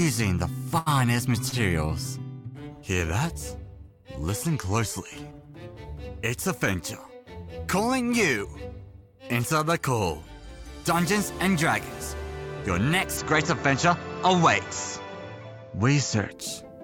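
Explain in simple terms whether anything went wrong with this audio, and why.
Two things went wrong. First, a short stall from a late packet happened twice. A chunk of audio arrived behind schedule, and the receiver's small holding buffer ran dry. To cover the gap, the receiver held the last sound until the chunk showed up, then carried on from the same point. Nothing is lost, but a sound is stretched for about 80 ms at 0.78 s and for about 30 ms at 1.49 s.

Second, from 13.17 s to 16.32 s the sound changes character, with nothing above 7.6 kHz and a new layer of background noise well below the sound itself. The likely cause is that the input switched to a poorer device, a different microphone or a headset in call mode that passes a narrower range of frequencies. There is no gap at the switch and the loudness stays roughly the same, so what you notice is the duller tone and the added noise.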